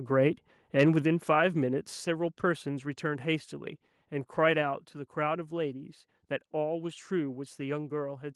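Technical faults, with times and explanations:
0.79–0.81 s, microphone overload: input gain was likely set too high, driving peaks about 2 dB past the converter's limit. A few percent of samples are flattened, giving a harsh crackle.
1.02 s and 2.04 s, microphone volume stepped down: the likely cause is the call software cutting input gain after finding the microphone too loud. Voice and background drop suddenly, by about 4 dB and then about 3 dB.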